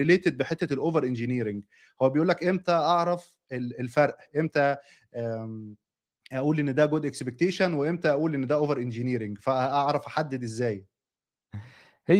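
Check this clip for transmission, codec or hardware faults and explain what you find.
Nothing stood out on listening to this speech clip.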